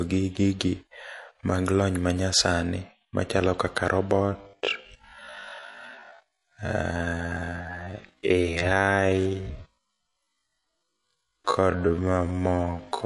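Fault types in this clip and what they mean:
MP3 compression: The speech sounds watery and swirly throughout, with smeared consonants. This is likely lossy MP3 coding at a low bitrate, around 48 kbps, where the encoder cuts the treble and drops weak frequency components that flicker between frames.
Time-stretched section: From 4.23 s, right after "lony manyasani machalo kaka", to the end, the pace suddenly drops to about half speed (0.51×) while pitch holds steady. This is likely software stretching that repeats short pieces to lengthen the audio.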